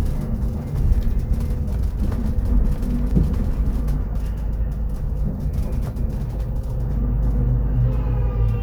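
At 0.98 s the output buffer briefly ran dry, an underrun with held sample: the converter froze on its last value for about 0.73 ms, a 32-sample gap, so the waveform sits flat before audio resumes with roughly 0.7 ms lost. A second underrun at 3.11 s holds for 1.45 ms, 64 samples, again dropping about 1.5 ms before the signal returns.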